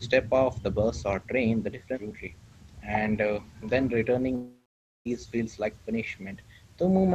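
At 4.35 s the speech dissolves into a buzzy smear that fades away, leaving about half a second of near silence before the speech picks up again at 5.07 s with 0.70 s of it gone. This is a long network dropout. Packets most likely stopped arriving, so the receiver stretched out the last sound it had, let it die away, and then jumped ahead when the stream came back.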